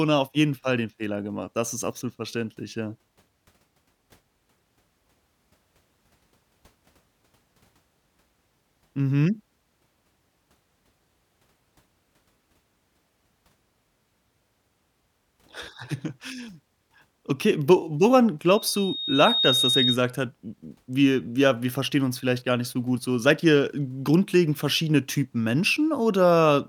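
At 18.48 s a loudspeaker feedback squeal begins and runs until 19.98 s. The microphone is picking up the loudspeaker it drives, and at 3.7 kHz the loop gain exceeds unity, so that frequency reinforces itself on every pass. It is heard as a thin, piercing tone that swells over roughly a second, ending up around 5 dB louder than the speech, before it stops.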